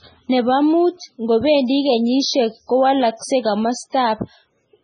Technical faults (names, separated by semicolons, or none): MP3 compression